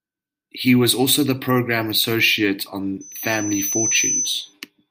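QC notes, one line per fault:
3.01–4.54 s: loudspeaker feedback squeal. A pure tone at 6 kHz swells over roughly a second until it sits at about the same level as the speech. The microphone is hearing its own loudspeaker, and at that frequency the loop gain passes unity, so the tone keeps building.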